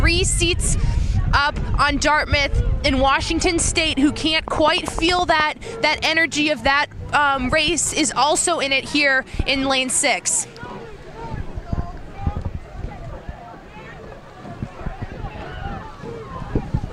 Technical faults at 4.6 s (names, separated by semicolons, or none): train of clicks